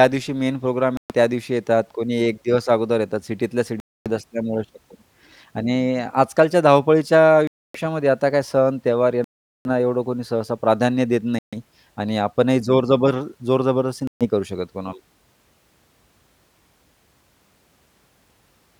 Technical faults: Bluetooth stall

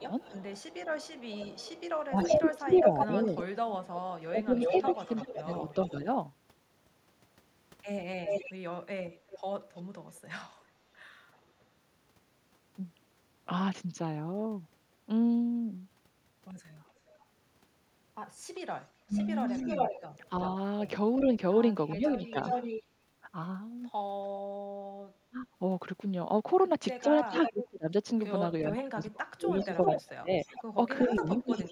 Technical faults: speech suppressed in double talk; echo leak

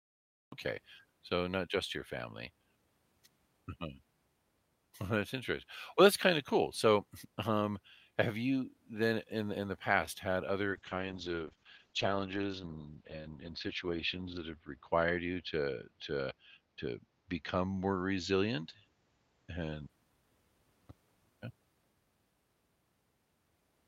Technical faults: cut-off start; call bitrate drop

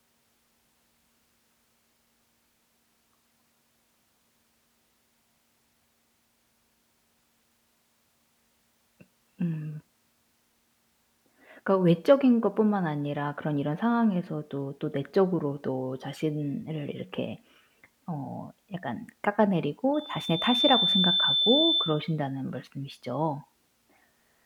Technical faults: loudspeaker feedback squeal

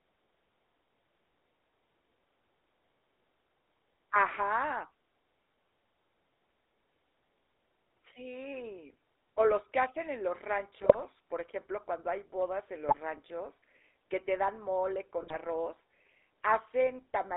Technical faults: GSM full-rate codec; GSM bit errors

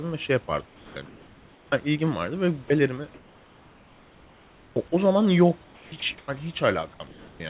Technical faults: comfort noise in place of the background; onset clipped by the voice detector; sound dropped by the voice detector; sound chopped by the voice detector

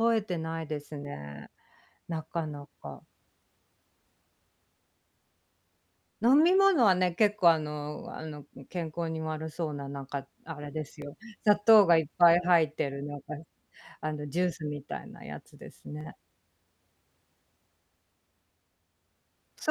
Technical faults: audio missing between chunks

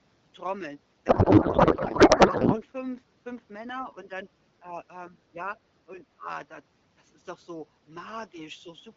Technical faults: codec payload misread; speech suppressed in double talk

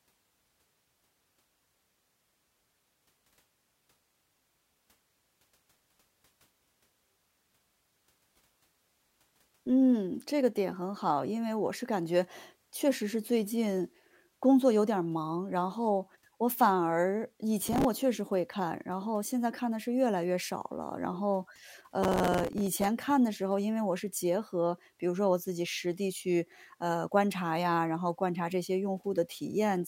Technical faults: processor overload crackle

